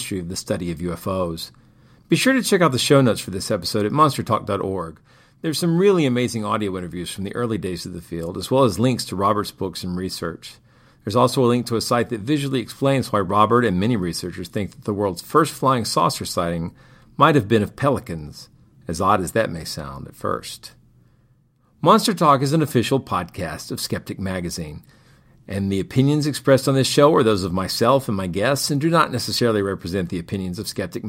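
A faint hiss and roughness rides on this speech recording throughout, growing on louder and brighter sounds; that is sample clock jitter, timing wobble of a couple of microseconds, leaving error roughly 35 dB below the signal.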